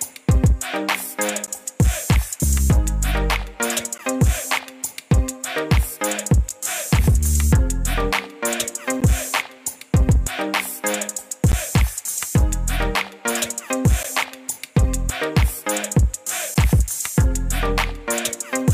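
At 1.47, 3.98, 6.49, 9.01, 11.52, 14.03 and 16.54 s there is a gap between chunks. The audio arrives in 2.5 s chunks. A silence of about 13 ms sits at each join. Nothing is lost, but each join is a short hole.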